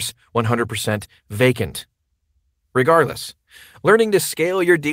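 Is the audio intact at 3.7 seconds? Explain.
Yes, the audio at 3.7 seconds is intact, with no dropout, click, distortion or other fault to be heard at that moment.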